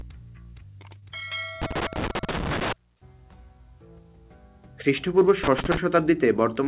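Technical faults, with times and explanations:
0.99–1.04 s, short stall from a late packet: a packet showed up late, the jitter buffer ran dry, and the receiver stretched the last bit of sound for about 29 ms until it arrived. Nothing goes missing, but that moment hangs a touch too long with a faint buzz or dip, and everything after runs 29 ms later.
1.62–2.73 s and 5.44–5.77 s, loose connector crackle: a worn or dirty contact is making and breaking as something moves, chopping the signal and popping wherever there's DC on the line. You get ragged, irregular scratchy bursts, a long one first and a shorter one later, sitting on top of the call path's band-limited sound with nothing above 4 kHz, which fits G.711 A-law.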